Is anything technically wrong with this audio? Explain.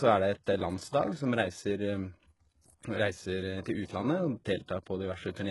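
Yes. Throughout the speech there is heavy damage that likely comes from HE-AAC compression at a very low bitrate, around 12 kbps. Treble is rebuilt from copied lower bands, so s sounds turn gritty and metallic. Unlike a plain low-pass, the top stays bright, cutting off sharply near 11.4 kHz.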